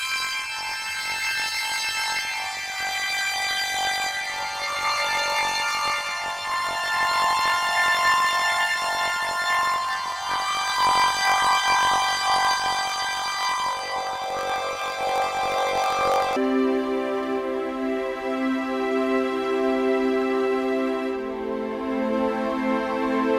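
From 0.0 to 16.37 s, planar audio is read as interleaved. Each block of about 21.33 ms, which fits 1024-sample blocks, plays left then right at double speed. The sound jumps an octave with a 46.9 Hz flutter, and the spectrogram shows harmonics doubled with vertical striping.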